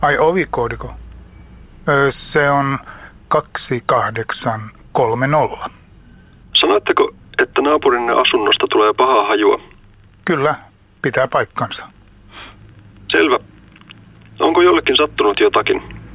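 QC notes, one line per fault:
The audio carries the bandwidth of a G.711 A-law call path at 64 kbps, with nothing above 4 kHz, and no fault is heard at any point.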